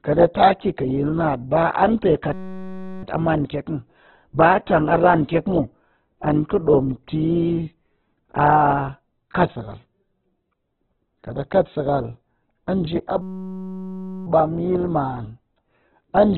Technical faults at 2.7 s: Opus compression; system hang loop

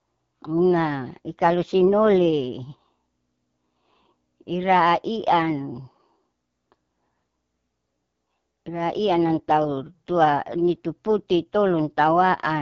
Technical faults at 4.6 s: AMR wideband (HD Voice) codec

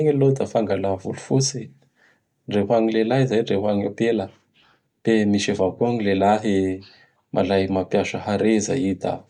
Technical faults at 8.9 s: none

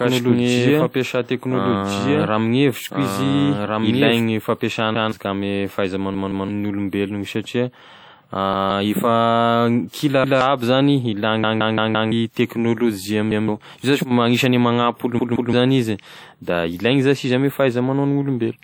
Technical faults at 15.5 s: WMA compression; repeated buffer

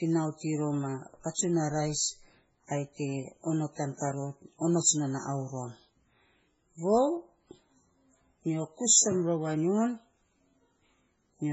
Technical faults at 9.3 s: MP3 compression

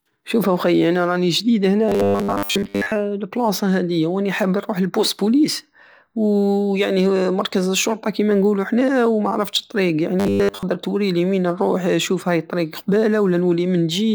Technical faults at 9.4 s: none

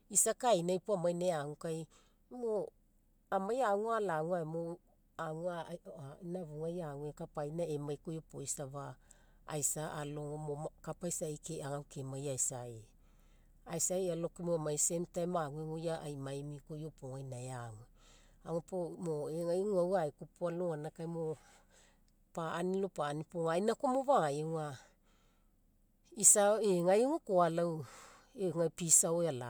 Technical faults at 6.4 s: none

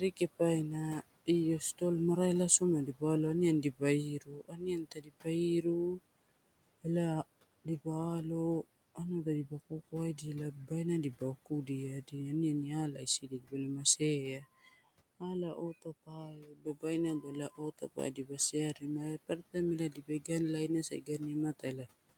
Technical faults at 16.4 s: speech cut by the noise suppressor

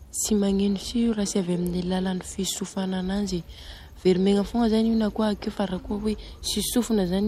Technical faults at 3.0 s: none

